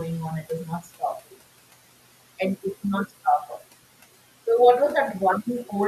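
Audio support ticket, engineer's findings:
Noise suppressor artifacts, throughout. Background sinks between phrases and swells back under speech. The noise suppressor pulls bands it classifies as steady noise down by about 17 dB frame by frame. The room noise it acts on sits about 18 dB under speech.

Speech cut by the noise suppressor, 0.81 to 1.02 s, right after "is not". A brief stretch of speech goes faint and swallowed, dropping by about 14 dB at its deepest, with around a tenth of a second affected in total. The suppressor treated low-level speech energy as noise and attenuated it along with the background.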